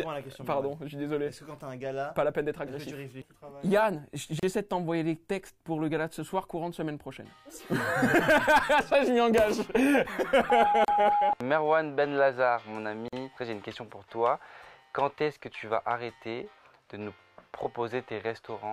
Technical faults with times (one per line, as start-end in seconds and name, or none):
4.39-4.43 gap at a join of encoded pieces
10.85-10.88 gap at a join of encoded pieces
13.08-13.13 gap at a join of encoded pieces